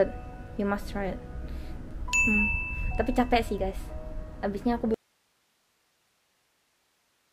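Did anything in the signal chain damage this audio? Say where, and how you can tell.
Yes. At 4.94 s the sound cuts out abruptly in an audio dropout to a faint residue that lasts to the end, leaving only steady hiss about 45 dB below the signal. The likely cause is a lost analogue connection feeding a still-live input; a fade or pause would not cut off that abruptly.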